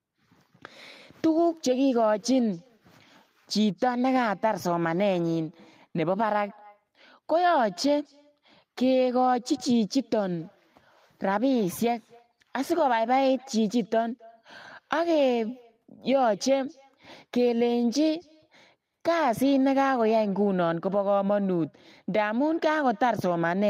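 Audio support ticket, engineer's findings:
Echo with no canceller, throughout. Speech shadowed by a faint, thin copy around 300 ms later, about 28 dB down. Far-end loudspeaker audio re-captured by far-end mic and returned over the network round trip; echo cancellation absent or disabled at far end.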